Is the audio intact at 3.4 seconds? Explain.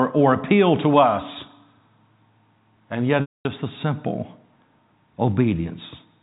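No. At 3.4 s the audio falls inside a packet loss with pitch repetition, running from 3.21 to 3.45 s. About 240 ms went missing, which fits eight 30 ms packets. To cover the gap, the receiver loops the last pitch period it had. That gives a brief buzzy, held tone that fades out over about 50 ms. The rest of the gap is silent. The speech then cross-fades back in on "the simple".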